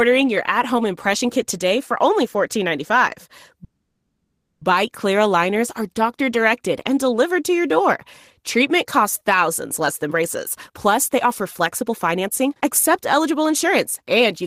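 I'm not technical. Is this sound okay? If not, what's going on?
No. From 3.64 to 4.62 s there is a call audio freeze: the speech stops moving forward and the last sound is stretched into a fading buzz or hiss for about a second, with a brief moment of silence at the end. The likely cause is that the network briefly delayed the incoming audio. Unlike a dropout, nothing is lost. The speech picks up exactly where it stopped and simply arrives about a second later than it would have.

From 9.80 s to the end, at 14.45 s, there is a jitter buffer speed-up. The speech plays at about 114% of normal speed, so it sounds rushed. The phone is catching up on the built-up delay by cutting out many tiny slivers of sound, adding up to roughly 0.7 s in total. This is different from simply playing a recording faster, because the voice's pitch stays the same and does not become squeaky.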